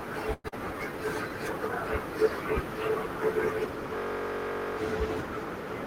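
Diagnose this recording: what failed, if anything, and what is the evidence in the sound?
From 0.33 to 0.54 s the speech breaks into a buzzy continuation of the last sound that fades over roughly 190 ms, followed by a brief silence of about 20 ms. When the voice resumes, around 100 ms of speech is simply gone. This is most likely a long network dropout. Packets stopped arriving, and the receiver's concealment stretched the final sound until it gave up. The gap also appears to have shifted the playout delay by around 50 ms.

Between 0.65 and 1.3 s the speech slows to about 90% of its normal pace with no change in pitch, and syllables sound drawn out. That is a jitter buffer slow-down. After the dropout, the receiver rebuilt its reserve by repeating individual pitch periods and pause fragments, adding 75 ms of time in the network buffering stage.

From 3.96 to 4.77 s the sound becomes a steady buzz at 46.9 Hz. 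A single 21.33 ms fragment repeats exactly, 38 times in a row. This is a system hang loop at the driver or buffer stage. The computer or its audio driver froze while the hardware kept replaying the same ring buffer, which fits a 1024-sample buffer. Once playback recovers, essentially no audio appears to be lost.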